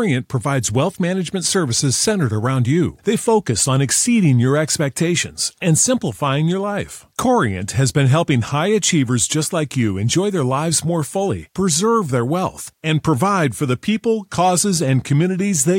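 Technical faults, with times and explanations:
No technical faults can be heard anywhere in this speech.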